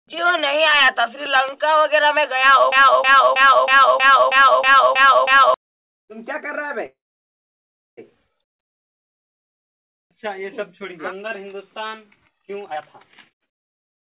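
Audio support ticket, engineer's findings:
Broken-record loop, 2.72 to 5.54 s. A 0.32 s chunk repeats exactly, back to back, nine times. Likely the player, encoder or stream stalled and kept re-sending the last fragment it held. Whatever should have played across those seconds is gone, not delayed.

Call audio freeze, 6.86 to 7.99 s. The last sound smears into a short buzz, then about 1 s of dead silence. Likely packets held up in transit, so the jitter buffer ran dry and the receiver filled the gap. Audio picks up exactly where it stopped, so nothing's lost. It's just 1.1 s later from here on.

Jitter buffer speed-up, 12.65 to 14.11 s. Runs at 165% speed with pitch unchanged, so it sounds rushed. The receiver had more buffered than its target and cut delay by dropping short pitch-period slices over and over, trimming roughly a second in total. The whole clip tops out at 4 kHz, which fits the G.711 narrowband leg.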